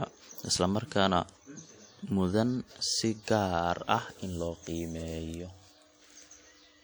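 It's a short speech clip, and for its whole length it carries the artefacts of a low-bitrate encode, even though the file itself looks generous. The spectrum runs up to about 20.1 kHz, so there's no obvious low cut-off to give it away. The likely story is low-bitrate audio saved at a high bitrate, which fits something like a 48 kbit/s WMA pass re-saved as 192 kbit/s MP3. The bigger file can't bring back what that first pass threw away.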